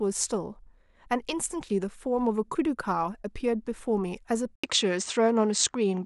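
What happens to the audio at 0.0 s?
Nothing goes wrong at 0.0 s; the speech starts cleanly and the audio is intact at that point.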